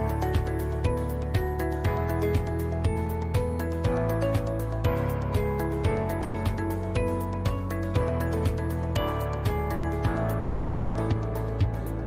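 At 6.24 s there's a brief call audio freeze running to 6.36 s, about 100 ms where the last bit of sound is held and smeared into a buzzy tail that fades before things pick up exactly where they left off. Then from 10.39 to 10.97 s it happens again, much longer: over half a second of that held sound decaying into a low hiss, then the audio carries on with nothing skipped. In both, packets were likely held up in transit and the jitter buffer ran dry, so the receiver had to fill the wait.

In between, at 9.74 s, there's a short stall from a late packet, lasting until 9.85 s. One packet just wasn't there on time, so the receiver stretched the preceding sound for about 90 ms until it showed up, then resumed from the same spot. You hear it as a sound hanging on a touch too long with a slight buzzy dip, and nothing actually lost, just a small added delay.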